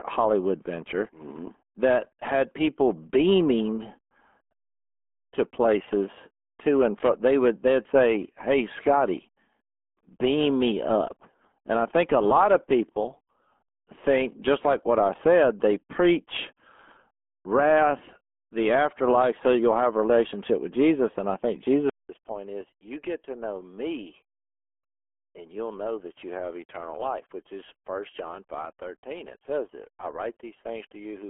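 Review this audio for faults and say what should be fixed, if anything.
Throughout, the speech carries heavy RealAudio 14.4 codec damage. This 8 kbit/s dial-up codec discards everything above about 3.7 kHz and crudely models the rest, so speech sounds muffled and gargly. A spectrogram shows a hard ceiling near 3.7 kHz with smeared, blocky harmonics. To prevent this, record or deliver through a modern wideband codec at a sensible bitrate.

At 21.9 s the audio drops out for 200 ms, then continues to the end at 31.3 s noticeably duller and roughly 10 dB quieter, with its upper limit falling to about 3.3 kHz and a faint new noise floor. This is likely an input switched to a poorer device. The waveform shows a gap then shrunken amplitude, and the spectrogram a lowered ceiling. To prevent this, lock the recording input so the system cannot reassign it mid-session.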